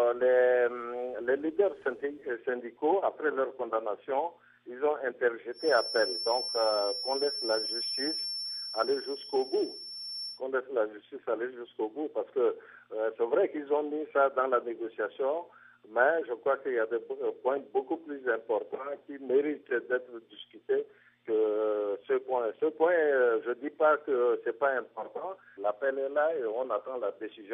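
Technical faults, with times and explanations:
5.51–10.42 s, feedback whistle: the loop from loudspeaker back into microphone was likely sitting right at the edge of feedback, so a single tone near 5.4 kHz keeps ringing without running away. It stays roughly 10 dB under the main sound as a thin, steady whistle that swells and fades slowly in level.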